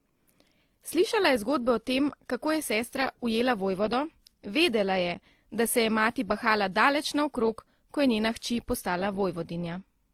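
Throughout the speech, the audio was likely transcoded between lossy codecs, from a WMA stage into a low-bitrate Opus encode, so both sets of artefacts are heard together.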